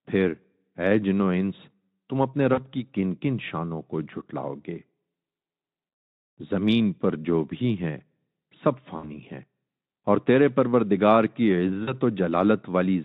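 Speech carried over a Speex-coded VoIP link shows VoIP packet loss concealment at 2.53–2.63 s, 8.97–9.11 s and 11.83–11.93 s, covering about 40, 60 and 40 ms of lost audio. The decoder stretches the last pitch and filter into a fading buzzy tone or coloured noise, and the sound stays weakened briefly after each gap.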